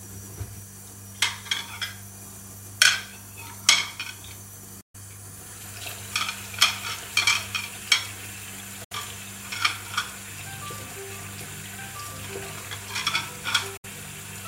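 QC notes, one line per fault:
4.81–4.95 s, 8.84–8.92 s and 13.77–13.85 s: digital broadcast dropout, three short holes where the sound ducks out through a very quick fade of about 8 ms and comes back mid-flow. The first gap runs 128 ms and the other two 64 ms each, which fits a receiver muting over whole lost or corrupted frames of roughly 32 ms. Whatever was sent during those gaps is simply gone, not smeared or repeated.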